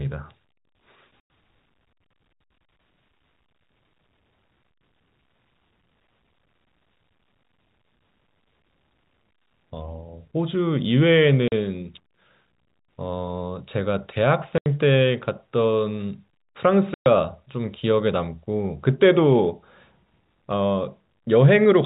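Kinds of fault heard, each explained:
Packet loss filled with silence: the speech drops into abrupt, hard-edged holes of 40 to 120 ms, consistent with 20 ms packets lost and replaced by silence.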